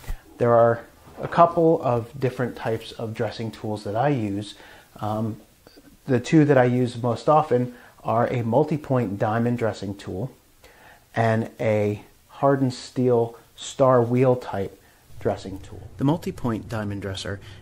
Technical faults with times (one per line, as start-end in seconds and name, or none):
none